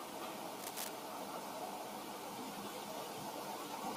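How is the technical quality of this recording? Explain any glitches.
There is one glitch. From 0.59 to 0.89 s, cable scratch noise appears as a dense, uneven scratching and rustling sitting only a little below the speech. This is likely a worn cable or connector being moved, its contact resistance flickering and injecting bursts of noise.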